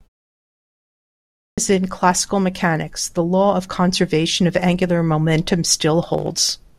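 At 1.19 s, after about 1.19 s of silence, speech bursts in abruptly with its opening sounds missing, roughly 0.39 s swallowed up to 1.58 s. This is a clipped start after a pause: the output device slept through the silence and needed time to wake before playing.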